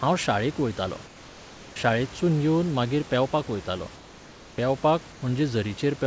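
At 1.06 to 1.76 s and 3.96 to 4.58 s, comfort noise in place of the background, likely from discontinuous transmission, shows as flat, textureless spectrogram bands about 2 to 3 dB quieter.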